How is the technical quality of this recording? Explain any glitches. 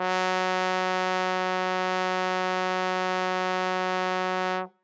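No glitches can be heard in the music, and no technical faults turn up anywhere in the recording. It has passed through a call's microphone processing, so nothing reaches above 8 kHz and the very lowest bass is trimmed away, as that processing normally does.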